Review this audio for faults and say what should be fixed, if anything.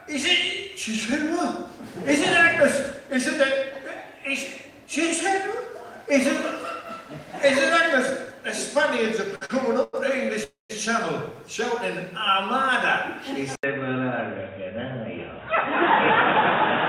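Three short stalls from late packets occur at 9.35 to 9.43 s, 9.45 to 9.51 s and 9.83 to 10.10 s. Each time the jitter buffer ran dry, and the receiver held the last sound for 57 ms, 43 ms and 98 ms before resuming from the same point. Nothing is lost, but the timing drifts later each time. On a spectrogram these show as short, horizontally smeared bands with flat harmonics. In the waveform they are a repeated cycle. A deeper adaptive jitter buffer, or better network prioritisation, would absorb these late arrivals.

A call audio freeze runs from 10.44 to 10.72 s. It is likely caused by packets held up in transit long enough to empty the buffer completely. The receiver extended the last sound as a fading buzz or hiss and then went silent for 140 ms, inserting 260 ms in total before the audio continued where it stopped. On a spectrogram this is a smeared stripe fading into a blank column. 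In the waveform it is a decaying envelope followed by a flat line. Monitoring network delay and adding jitter-buffer headroom would prevent this.

An input switch to a poorer device happens at 13.55 s and lasts to the end. It is likely the recording moving to another microphone or a headset call profile. There is an 80 ms silence at the switch. After it, the sound turns duller because nothing passes above 3.8 kHz, and a new background noise sits around 30 dB below the signal, while the level stays about the same. On a spectrogram the upper band goes abruptly empty after a short gap. In the waveform the level barely changes, apart from the brief flat line at the switch. Locking the input device for the whole session would prevent this.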